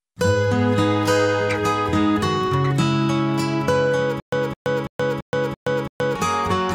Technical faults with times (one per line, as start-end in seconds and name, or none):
4.20-6.15 stutter with silent gaps